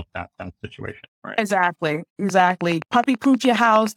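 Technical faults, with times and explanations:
2.29 to 3.96 s, train of clicks: about fifteen near-identical pulses tick regularly at roughly 9.5 per second over the speech to the end, peaking about 10 dB above it, likely from interference or a faulty connection or power supply. A spectrogram shows evenly spaced thin vertical broadband lines, a waveform repeated sharp spikes.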